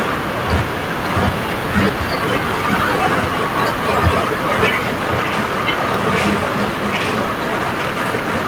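Nothing goes wrong anywhere in the speech here, so there's no technical fault to point to at any moment.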